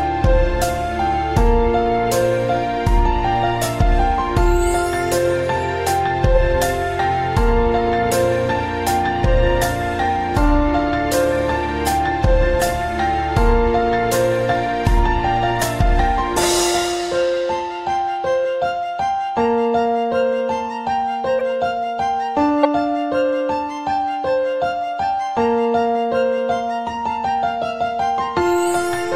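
Two brief glitches at 21.39 to 21.41 s and 22.63 to 22.65 s are corrupt frame decoded: damaged compressed frames played anyway, spraying misplaced spectral energy rather than dropping out silently.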